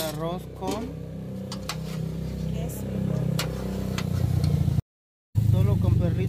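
A stream reconnect runs from 4.80 to 5.36 s. The connection dropped, so the player fell silent for about 0.55 s while it re-established the link and started a fresh decoder partway through the stream. When the audio returns it does not pick up where it stopped but roughly 0.3 s further on, as a live stream does, so a short stretch of the sound is simply missing across the gap.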